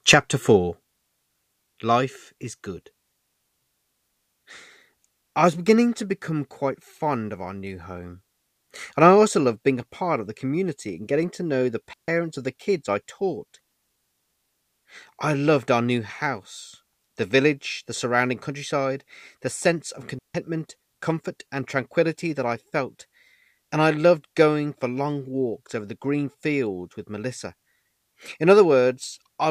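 Two clean holes of near silence cut through the speech, at 11.93 s for about 146 ms and at 20.19 s for about 162 ms, with no noise burst either side. These are digital wireless dropouts: the link lost too much data and the receiver muted with a very brief fade.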